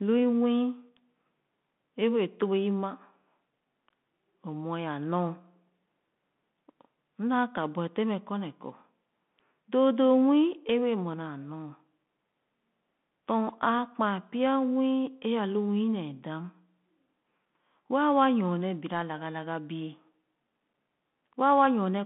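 Throughout, the speech sounds muffled and scratchy over a granular hiss, with nothing above 3.8 kHz: a Bluetooth CVSD headset codec, consistent with 64 kbps one-bit coding.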